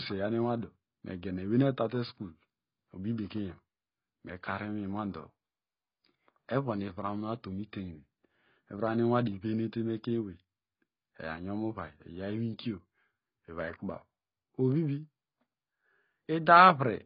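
From start to finish the speech is dull and smeared, with a watery warble on sustained vowels and a fizzy edge on sibilants. That points to AAC compression, likely AAC-LC at a very low bitrate, around 16 kbps. To fit that budget the encoder throws away everything above 5.3 kHz and quantises what remains coarsely. On a spectrogram the energy stops at a hard horizontal ceiling at 5.3 kHz, and there are blotchy gaps and noisy patches between the harmonics below it.

At 9.25 s a brief hiss comes just before a sharp onset, and the attack itself sounds softened rather than crisp. This is pre-echo. The codec transforms the audio in blocks and spreads its quantisation noise evenly across each one. Here the loud attack falls late in a block, so noise sized for the loud part also leaks into the quiet moment ahead of it, about 15 ms early. The waveform shows a fuzzy smear in front of the transient. 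On a spectrogram it is a thin vertical haze just before the onset.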